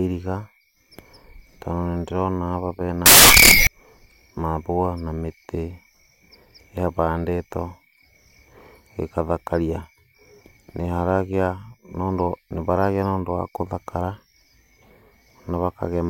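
A speech recording with samples built from the wrong bytes from 3.06 to 3.67 s. The reader misassembles each sample's bytes. Fast-changing low bits become the large part of each value. The result is loud, harsh broadband noise, close to white on loud sounds.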